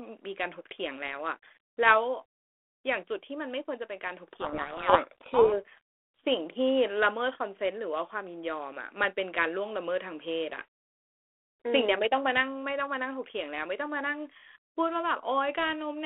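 Speech carried over a G.726 ADPCM link at 32 kbit/s, band-limited to roughly 300 Hz to 3.4 kHz with light coding damage. From 4.33 to 5.58 s a codec payload misread takes over: the decoder unpacks the G.726 code words with their bit order reversed, so each sample's difference value is wrong and the adaptive predictor drifts, burying the speech under harsh, gritty distortion. Normal decoding returns at 5.58 s once both ends agree on the packing again.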